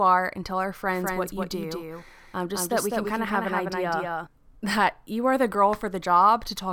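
Speech recording with a doubled audio track from 0.93 to 4.27 s: a dry copy lags roughly 200 ms behind, about 5 dB quieter, likely from a slower second capture path.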